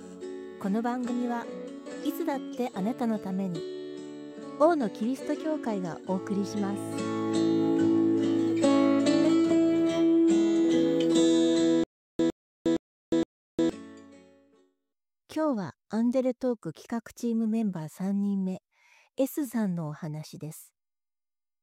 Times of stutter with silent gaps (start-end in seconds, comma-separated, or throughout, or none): 11.84-13.69